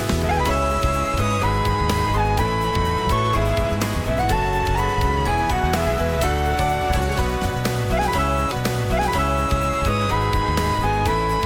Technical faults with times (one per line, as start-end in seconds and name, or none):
8.51-9.51 stream segment repeated